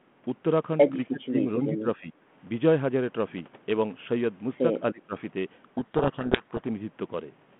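From 1.09 to 1.47 s, 1.67 to 2.13 s and 4.93 to 5.16 s, the speech sinks and breaks into fragments. The most likely cause is speech suppressed in double talk: the echo canceller mistook the talker for loudspeaker echo while the far side spoke, and turned both down. The deepest cuts are roughly 25 dB, 15 dB and 20 dB. On a waveform these appear as sudden notches in the envelope. On a spectrogram the bands fade, thinning first at the top.

From 5.74 to 6.65 s, the speech is buried under harsh, rasping distortion. This is a codec payload misread: the receiver assembled the bits of each G.726 code word in the wrong order, so every decoded difference is wrong. Elsewhere the line shows light G.726 texture consistent with 32 kbit/s and a 150 Hz to 3.4 kHz band. On a spectrogram the distortion fills that band with dense noise and hides the harmonics, and the waveform becomes jagged and spiky.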